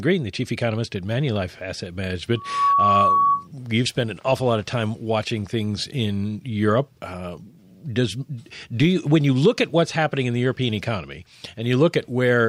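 A speech recording with loudspeaker feedback squeal from 2.35 to 3.47 s. A 1.1 kHz tone swells within a fraction of a second, reaching roughly 5 dB above the speech, as the microphone re-amplifies its own loudspeaker.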